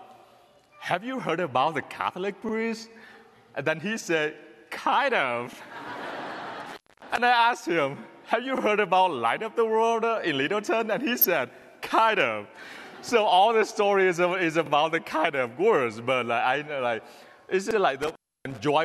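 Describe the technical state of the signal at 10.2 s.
At 10.2 s the signal is intact, with no dropout, distortion, clipping or other technical fault to be heard.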